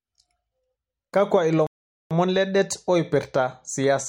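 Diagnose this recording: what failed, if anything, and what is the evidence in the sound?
A playback stall at the playback stage: the speech cuts to silence mid-flow at 1.67 s and stays silent for about 0.44 s, resuming at 2.11 s. The likely cause is the player running out of buffered data or its output thread being blocked until it recovered.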